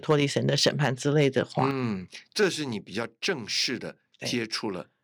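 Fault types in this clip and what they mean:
microphone overload: Between 0.10 and 0.87 s and again from 1.20 to 1.63 s, the loudest syllables take on a harsh, crackling edge where their peaks are flattened about 3 to 4 dB past the converter's ceiling, likely from input gain set too high. Unlike broadband codec distortion, it only touches the peaks, about 0.7 percent of samples.
microphone volume stepped down: At 1.71 s the whole signal, voice and background together, drops about 6 dB at once, then about 2 dB more at 2.73 s, likely the call software cutting the device's input volume after the clipped stretch. Unlike gradual gain riding, each change is a single instant step that stays down.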